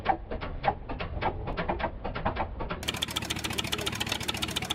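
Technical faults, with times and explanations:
1.53 s, block of digital silence: a very short run of samples drops to zero for about 0.67 ms, which fits a block of roughly 32 samples left unwritten, most likely because the output buffer was not filled in time. The signal jumps straight to zero and straight back with no fade, so the two abrupt edges merge into one brief click. The hole itself is far too short to hear as a gap.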